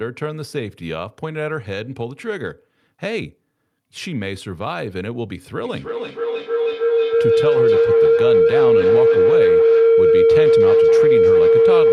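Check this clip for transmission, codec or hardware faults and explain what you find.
One fault is present: a feedback howl running from 5.65 s to the end of the clip. Sound leaving a loudspeaker is picked up again by a microphone in the same room and resent, gaining level on each pass, so it swells instead of dying away and narrows to a tone around 500 Hz, with a loop delay of roughly a third of a second. At its peak it stands about 11 dB above the speech. A spectrogram shows a bright horizontal band near 500 Hz, and the waveform swells past the speech envelope.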